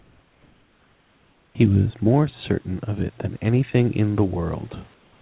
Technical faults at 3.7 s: none

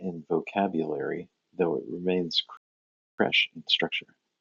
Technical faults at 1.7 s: none

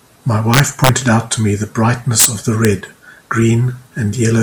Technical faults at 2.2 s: integer overflow

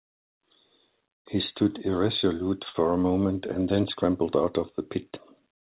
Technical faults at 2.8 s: short stall from a late packet

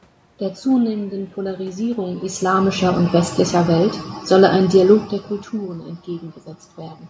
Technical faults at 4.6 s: automatic gain falling

